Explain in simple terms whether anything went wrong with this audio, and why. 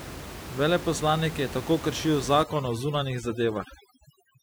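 Overdone noise removal kicks in from 2.43 s, right after "je tako kršil", to the end: the cleanup strips away faint speech along with room noise, leaving the background twinkly.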